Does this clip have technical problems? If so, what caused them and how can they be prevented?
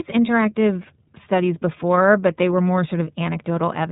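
Yes. The whole clip carries iLBC codec damage, plainly audible: nothing above 3.8 kHz survives, and the speech sounds rough and a bit synthetic because each 30 ms frame is coded on its own, which fits a 13.33 kbps mode. Using a wideband codec like Opus avoids this.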